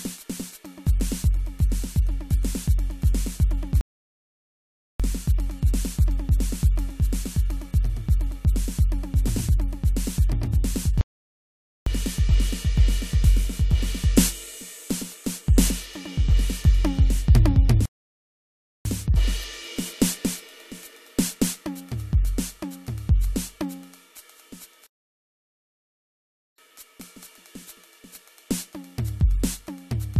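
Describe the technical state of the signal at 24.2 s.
At 24.2 s the music plays through intact, with no fault in the signal at that point.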